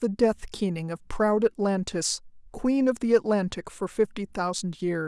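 Nothing goes wrong anywhere in this bit of speech, so there's no fault here to describe.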